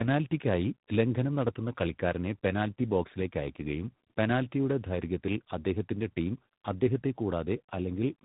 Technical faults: tandem speech coding

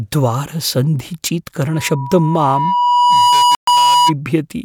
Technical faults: loudspeaker feedback squeal; Bluetooth stall

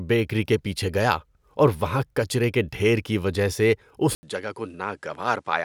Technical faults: input switched to a poorer device

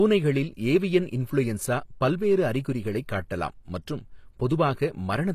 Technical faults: HE-AAC compression

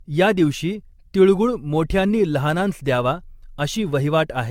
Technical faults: generation loss

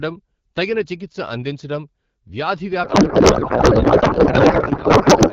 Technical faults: codec payload misread

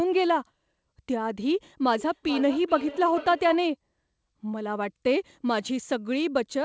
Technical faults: feedback echo between two devices

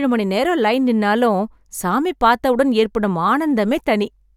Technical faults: none

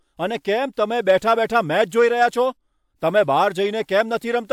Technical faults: none

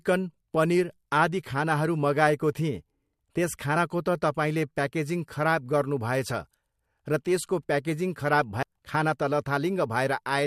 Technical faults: damaged data in a compressed stream

